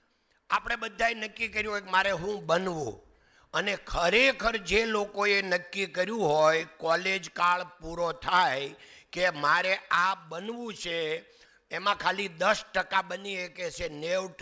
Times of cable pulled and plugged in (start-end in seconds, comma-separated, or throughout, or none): none